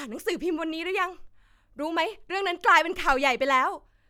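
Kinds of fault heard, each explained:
No faults can be heard in this speech recording.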